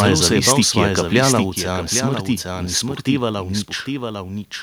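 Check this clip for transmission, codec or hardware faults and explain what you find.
Three faults stand out: a delayed second copy of the speech running under the whole clip, two stretches of microphone overload near the start, and a sudden step down in input level just after them.

Doubled audio track, throughout: a full-band copy of the speech trails the original by roughly 0.7 s, about 5 dB quieter. Two copies of the same signal are being mixed out of step, most likely because the audio is picked up a second time by a slower path. The result is a dry, hard-edged echo of every phrase. It has no reverberant tail or room colour, so it sounds like a second voice track rather than an acoustic reflection.

Microphone overload, 0.00 to 0.84 s (around "se je bal") and 1.16 to 1.39 s: the peaks are driven about 4 dB and about 2 dB past the converter's limit respectively, with under one percent of samples flattened. 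The input gain was likely set too high, so the loudest waveform tops hit the converter's ceiling and are sheared off. This puts a gritty, crackling edge on the strongest syllables in both stretches.

Microphone volume stepped down, at 1.5 s: immediately after the second clipped passage, the speech and the background drop together by about 5 dB in a single step. This pattern fits call software detecting the overload and lowering the device's input gain. Because the change happens in one jump rather than a smooth fade, the level shift is abrupt.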